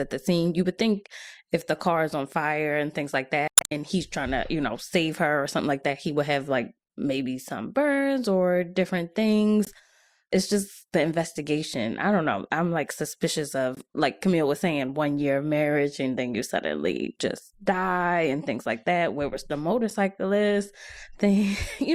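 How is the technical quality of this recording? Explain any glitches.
The speech carries four glitches from damaged data in a compressed stream: 3.46 to 3.72 s, 9.65 to 9.68 s, 13.75 to 13.78 s, and 19.90 to 19.92 s. Corrupted bytes make the decoder misread frames, lose sync and hunt for the next header, producing brief chirps or squawks, the first one longest.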